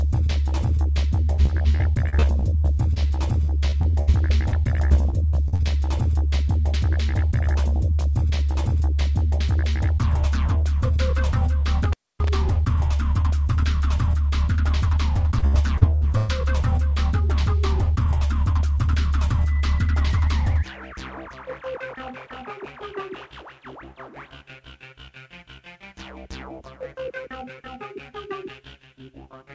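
Audio carried over a call link, with two stretches of repeated packet loss producing a robotic sound and one intermittent contact dropout. From 1.36 to 5.61 s, around two dozen short holes, none longer than 60 ms, are filled by stretching the preceding sound, so about 16% of that span is concealed and the audio turns choppy and robotic. A briefer burst from 15.39 to 16.30 s has fewer but longer holes, up to 111 ms, and about a third of it is patched over. On a spectrogram these show as smeared, repeated frames and blurred harmonics; the waveform shows copied cycles with seams. At 11.84 to 12.29 s an intermittent contact, likely a loose plug or cable, opens the line for about 260 ms. The sound cuts out between crackles, leaving faint hiss, which appears as a near-flat waveform bracketed by sharp spikes and as broadband vertical streaks in the spectrogram. Through the call path nothing reaches above 8 kHz, which fits a G.722 wideband codec.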